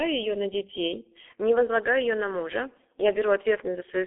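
From the start to 1.28 s the speech sounds hollow and phasey, with a fixed notch near 1.5 kHz. This is channel delay (comb filtering): one channel lags the other by a fraction of a millisecond, and summing them to mono cancels evenly spaced frequencies.

Throughout the clip the speech is muffled and hoarse, with smeared consonants and nothing above 3.8 kHz. The band is narrow, roughly 300 Hz to 3.5 kHz, which points to heavy G.723.1 codec coding at around 6.3 kbit/s.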